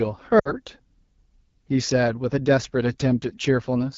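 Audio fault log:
throughout AMR wideband (HD Voice) codec. The speech sounds rough and raspy across the whole clip. That damage is plainly audible. The coder rebuilds the voice from a pulse-driven model of the vocal tract up to 6.4 kHz. Above that, up to 7 kHz, it adds only shaped noise. At a low rate the pulses and filter settings are coarse. The grit points to one of the lowest modes, which fits 8.85 kbit/s.
0.39 to 0.55 s lost AMR speech frames. The sound drops to near silence within two frames of a gap of about 60 ms. It then returns weak and rough. That fits three lost 20 ms frames. They failed their checks, so the decoder repeated the last good pitch and vocal tract settings. It lowered the gain each time. Wideband decoding fades quickly, so the sound drops to near silence rather than ringing on.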